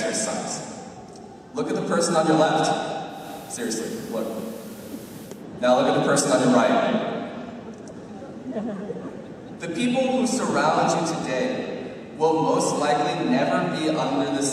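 From 3.07 s to 5.46 s, hiss roughly 25 dB below the signal appears and the level drops by about 1 dB, fading in and out over about 0.23 s at each edge. This is digital radio blending to analogue: the receiver lost its digital signal and cross-faded to the station's FM broadcast, then back.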